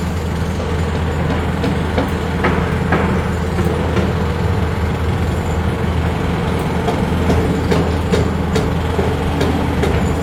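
The audio has an AAC frame loss with concealment at 0.60 to 0.67 s: a brief smeared, noisy patch about 43 ms long, which fits a single lost frame patched from the previous spectrum. From 8.72 to 10.13 s there's a train of clicks, around ten regular ticks at 5.7 per second, poking out a little above the sound, likely interference or a faulty connection.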